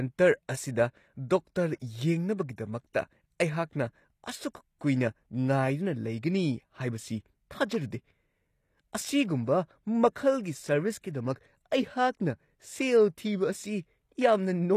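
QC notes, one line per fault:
throughout, HE-AAC compression: the speech was likely squeezed through HE-AAC at a low rate, with damage that fits about 24 kbps. Only the lower spectrum is truly coded and the treble is rebuilt from copied lower bands, so s sounds turn plainly gritty and metallic.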